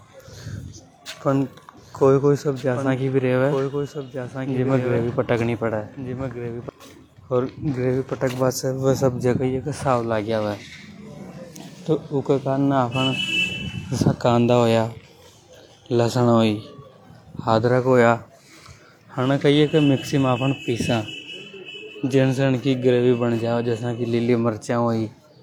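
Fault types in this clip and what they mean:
Doubled audio track: from 1.77 to 6.69 s a full-band copy trails the speech by about 1.5 s, around 10 dB quieter, likely from a slower second capture or an out-of-step edit; unlike echo, it has no decay or room colour and starts and stops abruptly.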